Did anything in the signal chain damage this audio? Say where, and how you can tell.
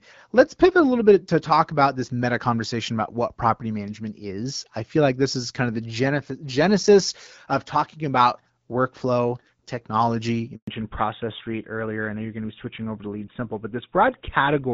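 Yes. Handover gap at 10.55 to 10.67 s, at the network stage: the speech dies away within a few tens of milliseconds and stays silent for 120 ms while the call switches networks and no speech frames arrive. That stretch is lost.

Fallback to narrowband from 10.67 s to the end, at the codec stage: the earlier HD Voice sound fits AMR-WB at 12.65 kbit/s. Afterwards nothing remains above 4 kHz and the speech turns duller and rougher, which fits GSM full rate.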